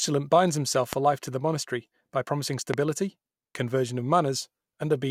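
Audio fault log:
0.93–0.95 s and 2.74–2.76 s, loud pop: single sharp pops just after "binds himself" and after "the monastery by promising", about 20 dB and about 15 dB above the speech, which carries on underneath. The likely cause is a voltage spike from a switch or static. Each pop appears as a tall, narrow spike on the waveform and a thin vertical line across all frequencies on a spectrogram.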